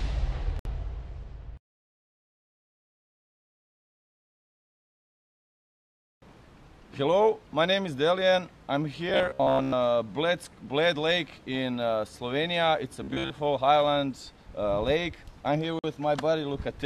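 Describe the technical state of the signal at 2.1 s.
At 2.1 s the signal is intact, with no dropout, distortion or other fault audible at that moment.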